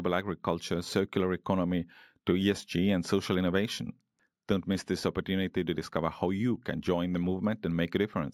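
Imaging from linear upsampling runs throughout the speech. The sound points to 16 kHz material raised to 44.1 kHz by straight-line interpolation, a weak filter that dulls the top of the band and leaves a mirrored copy from 8 to 16 kHz, about 30 dB down, heard as faint metallic shimmer on sibilants.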